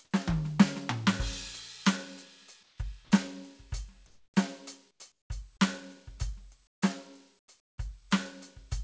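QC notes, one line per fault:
2.63–2.78, 4.07–4.34, 4.91–5.30, 6.67–6.82 and 7.39–7.78 s: comfort noise in place of the background. In the quiet stretches between passages of music, about 34 to 44 dB below the loud parts, the real background turns into steady, featureless hiss. This is likely discontinuous transmission, with the receiver synthesising shaped noise. It drops about 4 dB, 1 dB and 19 dB at 2.63, 4.07 and 6.67 s.
3.05–3.11 s: sound dropped by the voice detector. About 50 ms of musical sound is missing, and 60 ms of comfort noise stands in its place. The likely cause is the sender's detector mistaking this material for background, stopping transmission until it triggered again.
5.57–5.62 s: short concealed packet loss. About 30 ms of audio did not reach the decoder in time, and 22 ms was filled by extending the preceding sound before blending back. It is heard as a brief smear or wobble in the music.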